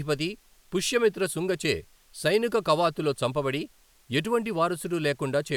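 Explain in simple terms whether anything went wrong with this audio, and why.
Nothing went wrong here: the speech signal stays intact and steady throughout, with no technical faults to point to.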